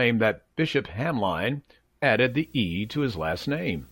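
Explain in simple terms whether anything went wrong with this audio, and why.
Something did go wrong. From 2.16 seconds to the end, a video or display buzz sits under the speech. A screen or video cable is leaking into the audio. You hear a quiet buzz at 59.94 Hz, the picture's refresh rate, with a very high whine near 15.7 kHz.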